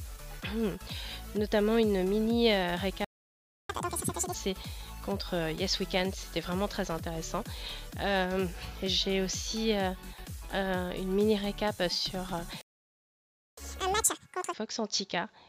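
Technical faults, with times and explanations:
3.05–3.70 s and 12.61–13.58 s, playback stall: the sound cuts off mid-flow into silence for 0.65 s, then later for 0.96 s, and resumes where it broke off. The player likely ran out of buffered data or had its output thread blocked, so nothing reached the output until it recovered.
3.70–4.34 s and 13.58–14.53 s, catch-up at higher speed: right after each gap the audio rushes along at double speed, pitched up by close to an octave, then drops back to normal. The player is resampling its backlog to win back the time lost in the stall.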